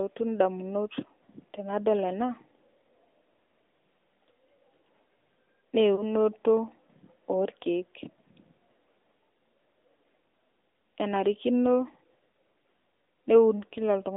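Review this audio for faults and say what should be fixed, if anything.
The AMR narrowband mobile codec runs throughout. Its buzzy, synthetic speech fits roughly the 10.2 kbps mode, and the spectrogram shows a hard band from 250 Hz to 3.7 kHz. Sending wideband or higher-bitrate audio would prevent this.

Lost AMR speech frames at 5.96–6.03 s and 8.04–8.09 s each fit one missing 20 ms frame. The decoder replays the last settings, producing a short warbly dip visible as a brief amplitude sag. Stronger radio error protection or retransmission would prevent it.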